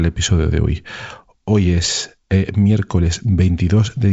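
Nothing here needs fixing: it's a short piece of speech carried over what sounds like G.722 wideband telephone coding, and no technical faults turn up anywhere in it.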